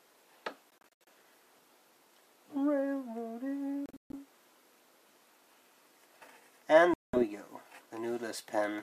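The audio has three short Bluetooth dropouts, at 0.70–1.08 s, 3.86–4.16 s and 6.94–7.23 s, each losing about 0.2 s in total, likely from packets missing the wireless deadline. They show as vertical blank gaps in the spectrogram and flat-line holes in the waveform, and the sound resumes as if it had kept playing.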